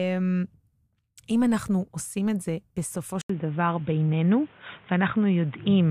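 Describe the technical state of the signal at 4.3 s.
The input has likely switched to a poorer device from 3.22 s to the end: after an 80 ms gap, the sound loses everything above 3.8 kHz, shifts about 5 dB in level, and carries new noise roughly 35 dB down.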